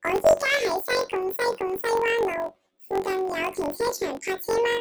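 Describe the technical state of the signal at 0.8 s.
At 0.8 s the speech is hit by planar audio read as interleaved, and that runs through the whole clip. Each short block of about 21.33 ms plays twice at double speed, left then right, which fits a 1024-sample block. You get an octave-up, robotic buzz chopping at about 46.9 Hz.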